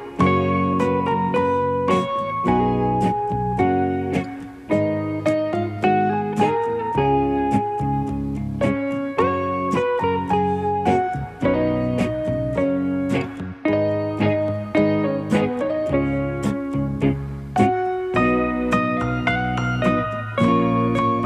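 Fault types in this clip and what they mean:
No technical faults can be heard anywhere here.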